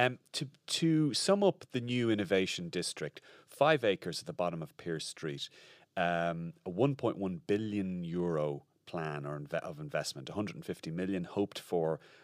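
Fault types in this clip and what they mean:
There are no fault types in this clip, so there is nothing to explain about what they mean.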